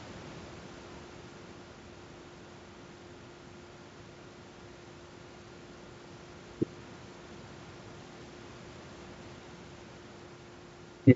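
Nothing goes wrong in this speech clip; there's just some faint room noise sitting about 35 dB below the talking, and the wideband telephone coding at 64 kbit/s adds nothing you'd notice beyond perhaps a trace of its usual character.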